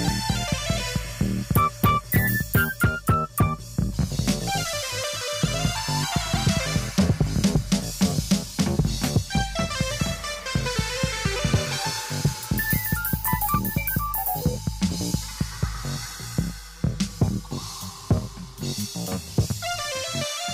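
No technical faults are audible.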